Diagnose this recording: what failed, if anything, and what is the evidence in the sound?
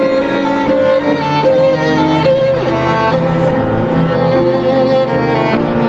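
Gain pumping runs through the whole clip, a swing of around 5 dB. The likely cause is input gain set far too high, with a fast limiter or compressor yanking the level down on each peak. A noise gate would cut the background to silence instead of breathing it up and down. The band ending near 8 kHz is simply the Opus call path.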